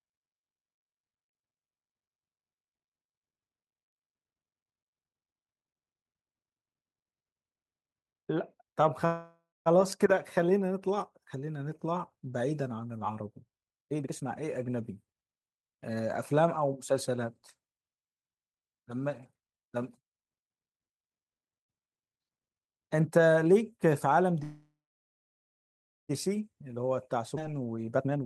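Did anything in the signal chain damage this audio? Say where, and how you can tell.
Yes, the damage comes from the network and the receiver's jitter buffer in a call path.

Call audio freeze at 9.05 to 9.68 s and again at 24.43 to 26.11 s. Each time the last sound is carried on as a fading buzz or hiss that decays to silence, about 0.21 s of it in the first case and about 1.32 s in the second. That points to packets held up in transit, most likely leaving the jitter buffer empty. The sound then resumes where it stopped, so nothing is lost, but 0.6 s and 1.66 s of delay are added.

Jitter buffer speed-up from 13.83 to 16.93 s and from 27.18 to 28.24 s. The sound runs hurried at the same pitch, at 119% speed in the first stretch and 144% in the second. The buffer held more than its target, so the receiver trimmed short pitch-period slices again and again to catch up. Roughly 0.7 s and half a second are removed.

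Skip ahead at 27.36 to 27.39 s, inside the second speed-up. Playback jumps forward with almost no gap, and roughly 0.4 s of speech is missing, its two sides butted together. Audio was dropped while later audio was already queued, either lost in transit or discarded when the overfilled jitter buffer overflowed, which fits the catch-up happening around it.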